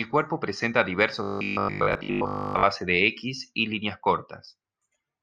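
From 1.23 to 2.65 s the speech takes on a robotic sound from repeated short buffers: a rigid 50 Hz metallic buzz. The likely cause is starved playback looping roughly 20 ms of audio, so most of that stretch is repeats rather than new sound.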